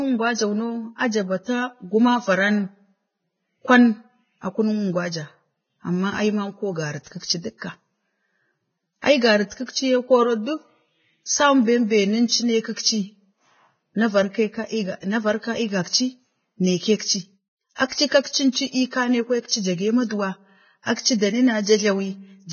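Throughout, heavy Vorbis compression, likely at a very low bitrate, cuts everything above 6.6 kHz and quantises treble into hiss, so speech sounds grainy.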